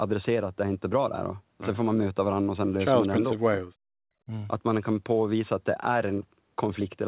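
Between 3.35 and 3.84 s the speech drops out in pieces by about 40 dB, with a shallower dip of about 10 dB from 4.26 to 4.30 s. This is likely speech suppressed in double talk, where the echo canceller turned the talker down. On the waveform these show as notches, and on the spectrogram as faded gaps.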